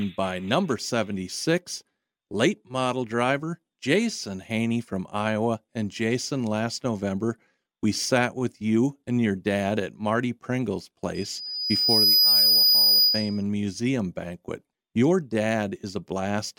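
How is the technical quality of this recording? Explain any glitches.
The recording has one clear glitch, a loudspeaker feedback squeal. From 11.14 to 13.43 s the microphone picks up its own loudspeaker, and at 4.9 kHz the loop gain exceeds one, so a pure tone swells over roughly a second to around 10 dB above the speech. A spectrogram would show a bright horizontal line at 4.9 kHz, and the waveform would show the envelope ballooning.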